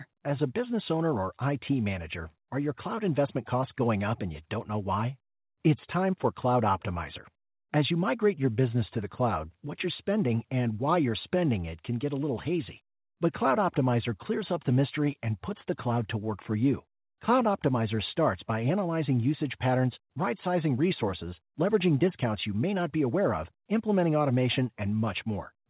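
No technical faults are audible.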